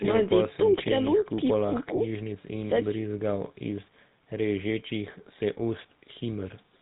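GSM full-rate codec coding runs throughout the speech. The codec rebuilds the voice from a vocal-tract filter driven by a regular pulse train, keeping only a third of the excitation detail, which fits the old 13 kbps full-rate mode. Nothing survives above 4 kHz, so sibilants sound dull and boxed in. The pulse-based rebuild adds a plainly audible buzzy, gravelly roughness to the voice from start to finish.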